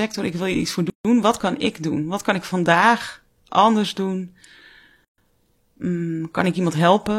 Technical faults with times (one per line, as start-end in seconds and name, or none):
0.90-1.05 gap at a join of encoded pieces
5.05-5.18 gap at a join of encoded pieces